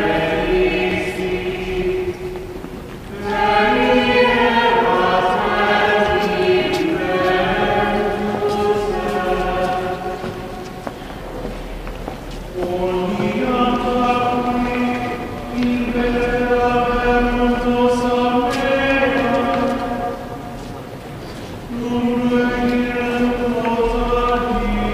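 Nothing stood out as a problem anywhere in the recording on listening.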